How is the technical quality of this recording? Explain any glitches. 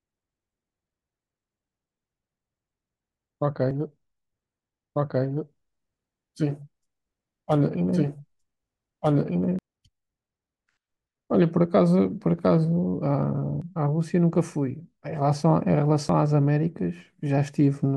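The speech has a couple of clear technical problems: three short skips and a stretch where the audio plays twice over itself.

At 3.71 s, 13.62 s and 16.09 s you hear tiny jumps where around 20 ms of sound just vanishes and the two sides butt together. That's most likely audio missing between chunks. The recorder seems to work in blocks of about 2.5 s, and it drops a sliver each time it closes one block and opens the next. The gap is short, so it comes across as a quick hiccup.

From 4.95 s to 9.59 s there's a doubled audio track. A second full copy of the speech runs about a second and a half behind the first and sits at roughly the same level. It has no reverb tail or room colour, so it doesn't read as an echo. It just sounds like two overlapping takes, and it cuts in and out abruptly at those edges. The likely cause is the same signal being captured again through a slower path and mixed back in.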